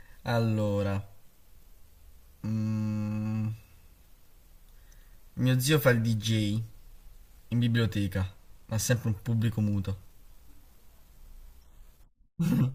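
Speech, with channel delay (comb filtering) from 8.15 to 9.15 s: one channel lags the other by about a single sample before summing to mono, placing the first notch around 20 kHz and slightly dulling the top end.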